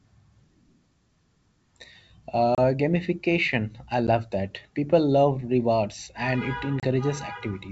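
At 2.55 s a hole of about 30 ms, roughly a few packets, opens just before "gamification I". At 4.07 s a 10 ms gap, about one packet, follows "gamification I". At 6.80 s another 30 ms hole comes after "love rewards and it". These are packet loss on an ADPCM call, carried over G.722 wideband coding. In a plain dropout the audio resumes cleanly. Here the receiver's adaptive predictor and step size lose step with the sender, so each hard-edged silence ends in slightly distorted speech that settles within tens of milliseconds.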